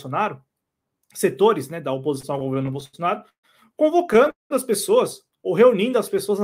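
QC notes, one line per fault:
2.15–3.45 s and 4.13–4.52 s, repeated stalls (stutter): packets kept showing up late, so the jitter buffer kept running dry and the receiver stretched the last sound to cover each gap. The first stretch has twelve short holds totalling 339 ms, the longest 142 ms, about a quarter of that span. The second has four holds totalling 228 ms, one lasting 200 ms and faded, covering over half the span. Nothing actually drops out, but it drags and hiccups.
5.37–6.19 s, jitter buffer slow-down: the buffer was topping itself up by repeating single pitch periods and bits of pauses, adding 63 ms and running at 93% speed. The pitch stays put, but sounds get drawn out.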